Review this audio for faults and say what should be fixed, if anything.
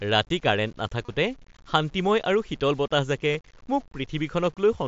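Low bit depth without dither runs through the whole speech clip. There's a grainy, buzzy distortion that rides along with the speech and gets rougher in the quieter stretches and word tails. The noise sits only around 35 dB below the signal. That points to audio that was likely rounded down to about 8 bits with no dither, so the rounding error tracks the waveform instead of becoming a steady hiss. Fix: keep the chain at 16 bits or more, and add dither whenever you reduce bit depth.

Concealed Bluetooth headset packet loss shows up twice. The first is at 1.05 to 1.09 s, where the audio briefly turns into a held, buzzy tone and then warbles as the real signal comes back. That's about 30 ms of missing audio, which fits four lost 7.5 ms mSBC frames patched over by repeating the last matching bit of waveform. The second is shorter, at 3.33 s right after "শীতল বতাহজাকে". It's about 15 ms and fits two frames. 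The mSBC link itself carries the wideband speech with only light codec grain. Fix: improve the radio link by keeping the headset close to the phone and clearing away interference and competing 2.4 GHz traffic.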